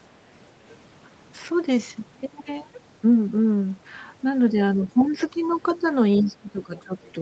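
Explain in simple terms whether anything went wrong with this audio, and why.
Yes, a few things went wrong, all of them when two people talked at the same time.

The first is speech suppressed in double talk. At 2.22 to 2.44 seconds the talker's voice drops sharply for a brief moment. From 4.52 to 5.84 seconds it dips again, more gently, for under a second in total. From 6.21 seconds to the end it sinks once more. The likely cause is the call's echo canceller. It could not tell the talker apart from the other person's voice coming out of the loudspeaker, so it turned everything down.

The second is the other side's voice leaking through. A faint second voice can be heard from 5.0 to 5.74 seconds, again in a tiny scrap at 6.22 to 6.28 seconds, and very quietly from 6.78 to 7.08 seconds. It is much softer than the main talker. The echo canceller likely did not fully remove the loudspeaker sound picked up by the microphone, so bits of the other person slipped back into the recording.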